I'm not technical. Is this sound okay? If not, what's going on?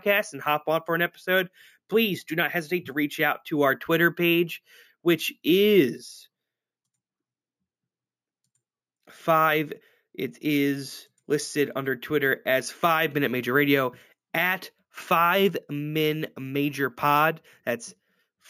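No. Imaging from sample-and-hold upsampling runs through the whole recording. The speech was stored at a lower quality, then converted to a higher one by repeating each sample with no smoothing. That leaves a reflected copy of the sound in the range from about 8 kHz to 16 kHz, heard as a bright metallic fizz that rises and falls with the speech, and its pitch moves the opposite way to the voice.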